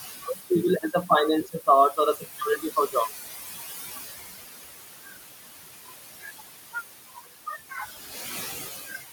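A noise suppressor runs through the whole clip, pulling steady noise down by about 16 dB frame by frame. The room noise, about 9 dB below the speech, sinks between words and rises beneath them. The suppressor also mistakes speech for noise and cuts it at 0.22–0.51 s, 1.43–3.1 s, 5.04–5.14 s, 5.7–6.41 s, 7.09–7.27 s and 7.7–7.82 s. Quiet sounds and word endings drop by about 12 to 19 dB and come out swallowed, with the longest stretch, near 1.43–3.1 s, losing around half a second in total.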